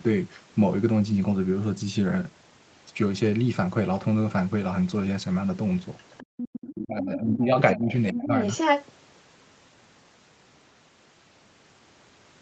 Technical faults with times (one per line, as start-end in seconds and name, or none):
5.98-6.70 other side's voice leaking through
6.27-6.45 speech suppressed in double talk
6.70-8.36 speech suppressed in double talk
7.07-7.11 other side's voice leaking through
7.89-8.85 other side's voice leaking through